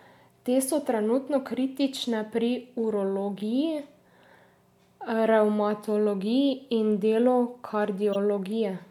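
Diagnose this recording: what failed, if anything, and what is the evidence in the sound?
Codec stage: a corrupt frame was decoded at 8.12 to 8.16 s, a brief glitch where flipped bits across a few frames misplaced spectral energy.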